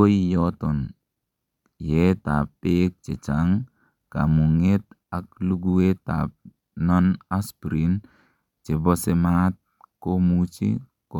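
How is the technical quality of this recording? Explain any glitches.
No technical glitches can be heard in this recording.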